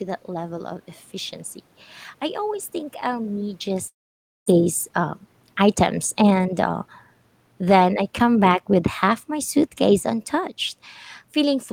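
A speech recording with three separate faults. At 3.87 s the sound breaks off: what came just before smears into a fading buzzy tail that gives way to near silence, and the speech resumes at 4.50 s with roughly 400 ms of it simply gone. That pattern is most likely a long network dropout, where no packets arrived and the receiver stretched the last audio as concealment for a short while, then went quiet until the stream returned about a fifth of a second further behind. The level change just before, around 3.5 s, is only the talker shifting position. From 4.58 s to 7.15 s the speech sounds rushed, running about 7% fast while the pitch stays put. This is a jitter buffer speed-up. The buffer was holding more than its target, so the receiver trimmed many short pitch-period slices in a row, removing roughly 200 ms in total to catch up. From 7.56 s to 10.61 s the level sinks gradually by about 4 dB, and the room's background noise falls with the voice. 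That joint drop marks automatic gain falling: the gain control judged the input too loud or its background noise too strong and eased its gain down, rather than the talker moving away.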